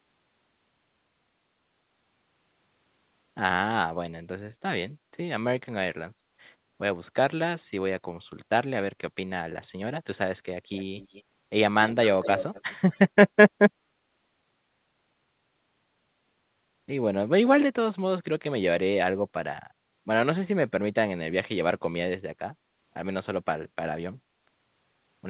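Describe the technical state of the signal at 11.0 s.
At 11.0 s the signal carries an echo leak, running from 10.75 to 11.23 s. A faint, delayed copy of the speech sits behind the direct sound, trailing it by 217 ms and lying well below it. The likely cause is a far end on loudspeaker whose echo canceller let part of its microphone pickup through and send it back. Like the rest of the call audio, the echo is band-limited, with nothing above 4 kHz.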